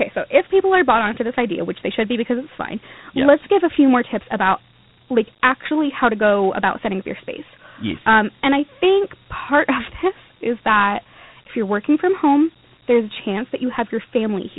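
Throughout the speech, Dialogic VOX ADPCM coding is plainly audible: nothing remains above 3.9 kHz, consistent with 4-bit ADPCM at 8 kHz and roughly 32 kbps. The coarse 4-bit step tracking leaves a gritty hiss that rises and falls with the speech.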